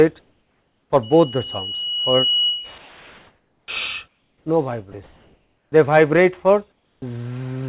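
Audio passed through a narrowband call path, with nothing above 4 kHz, which fits a G.711-style telephone codec. Comfort noise in place of the background appears at 0.2–0.92 s, 4.08–4.46 s and 6.72–7.02 s. Each pause, likely from discontinuous transmission, is filled with flat, textureless noise that sits about 2, 4 and 10 dB lower and shows as a smooth grey band on a spectrogram. Onsets clipped by the voice detector at 0.9, 3.66 and 7.0 s begin abruptly, about 20 ms late. On the waveform they are sharp vertical edges, likely from the detector reacting slowly. Sound chopped by the voice detector between 4.92 and 5.72 s drops out in two or more places as the detector likely toggles transmission, and the spectrogram shows patchy gaps.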